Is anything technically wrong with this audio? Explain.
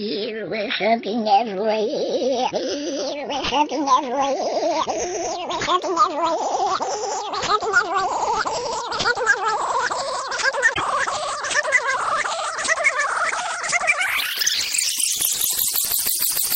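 Yes. From 10.73 to 10.81 s the audio skips forward and briefly breaks up, likely a broken MP3 bit reservoir: after frames went missing, about three 26.1 ms frames decoded from borrowed bytes belonging to other frames. Spectrogram and waveform show an abrupt 84 ms discontinuity.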